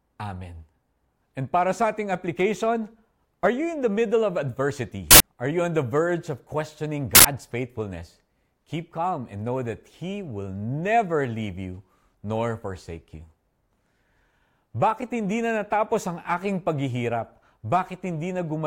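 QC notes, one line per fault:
5.11–5.20 s and 7.15–7.25 s, uninitialised buffer: two loud bursts of harsh digital noise, each about 93 ms, which fits a 4096-sample buffer played before any audio was written, so stale memory came out as samples. On a waveform each shows as a dense block with abrupt edges; on a spectrogram, a broadband vertical slab.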